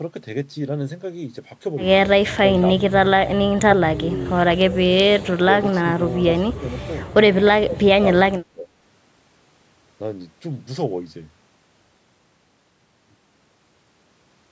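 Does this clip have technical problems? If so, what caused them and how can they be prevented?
Yes. The speech dips and breaks up in brief fragments at 2.41–2.65 s, 2.88–2.94 s, 4.0–4.15 s, 6.52–6.64 s, 7.53–7.88 s and 8.31–8.7 s. Some dips are slight; the worst fall by about 30 dB and nearly silence the voice. The likely cause is speech suppressed in double talk: with both ends talking at once, the echo canceller mistook the local voice for loudspeaker echo and turned it down. A headset, or an echo canceller with better double-talk detection, prevents this.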